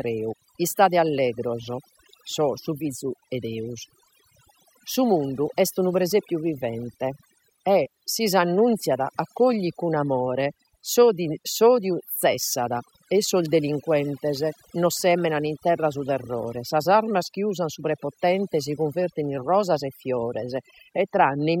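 From start to finish the speech suffers from overdone noise removal: a noise reduction stage was pushed far too hard on a noisy source, so any frequency band sitting close to its noise estimate gets cut deeply or muted outright. Quieter components of the voice fall under that threshold and are stripped away with the noise. The gaps between phrases collapse to near silence dotted with twinkling, chirpy specks.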